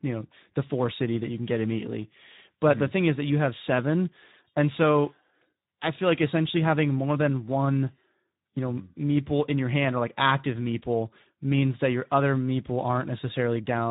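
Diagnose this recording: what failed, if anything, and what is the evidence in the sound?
The Speex codec stage ran at a low setting, likely near 11 kbps, starving the excitation: speech sounds hoarse and noisy throughout, with nothing above 3.8 kHz.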